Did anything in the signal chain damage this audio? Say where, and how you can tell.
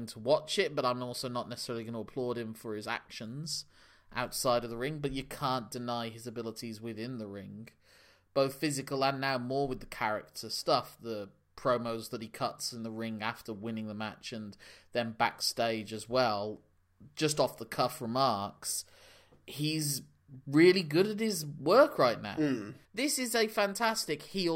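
No, nothing in this speech recording stood out as damage from any stage of the signal chain when I listened to it.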